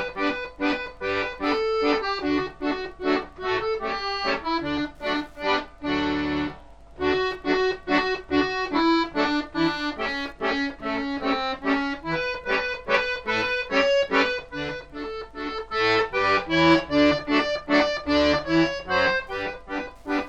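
Wi-Fi interference runs throughout: a nearby radio's beacon, rectified every 102.4 ms, leaves a faint tick ten times a second, roughly 45 dB down.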